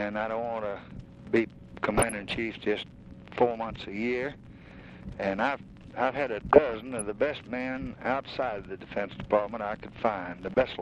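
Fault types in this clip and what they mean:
DAB burbling: Three short bursts of burbling break over the sound, from 1.92 to 2.37 s, 6.53 to 7.02 s, and 10.37 to 10.62 s. The cause is weak reception. Bit errors, around half a percent, slip past the error correction into the MP2 audio data. Corrupted samples put short blips of noise into single sub-bands, and corrupted scale factors make sub-bands leap in level for up to a frame.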